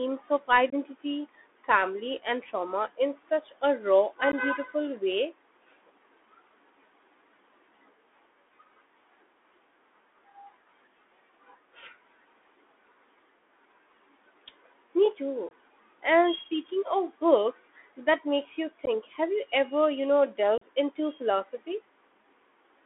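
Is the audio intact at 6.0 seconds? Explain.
No. At 6.0 s you're hearing the Bluetooth CVSD headset codec, which runs through the whole clip. It codes one bit per step, which fits a 64 kbps stream. The band sits at 250 Hz to 3.5 kHz, with s sounds scratchy, loud highs distorting, and a grainy hiss underneath.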